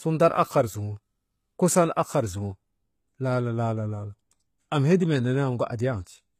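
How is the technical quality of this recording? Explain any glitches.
The speech carries plainly audible codec damage from start to finish, and it comes from one source. HE-AAC compression, most likely at a low rate around 20 kbps, affects the whole clip. Only the lower spectrum is properly coded. The treble is synthesised by copying lower bands upward under a coarse envelope, so its harmonics don't align with the real ones. S sounds come out gritty and metallic, and nothing remains above about 14.9 kHz. A plain low-pass filter would leave the treble dull instead of bright.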